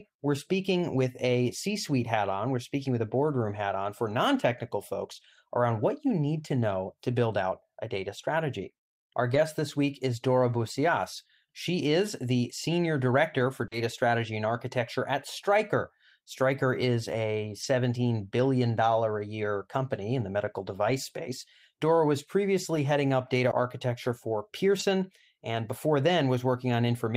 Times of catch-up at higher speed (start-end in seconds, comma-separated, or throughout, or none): none